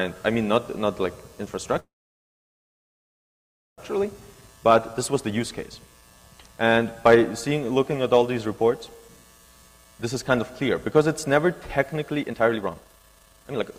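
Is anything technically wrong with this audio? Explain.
Yes. From 1.79 to 3.80 s the sound stops: a brief fading continuation and then almost two seconds of near-silence, after which it resumes exactly where it left off with nothing lost. This is likely a call audio freeze, with delayed packets emptying the jitter buffer.

Three stretches then play faster at unchanged pitch and sound hurried. From 4.05 to 6.78 s and from 8.33 to 10.75 s the speed is 109%. From 12.23 to 13.72 s it is 181%. This is jitter buffer speed-up: after the stall the buffer held too much, so the receiver cut tiny pitch-period slices, about 0.3 s, 0.2 s and a full second, to shed the built-up delay.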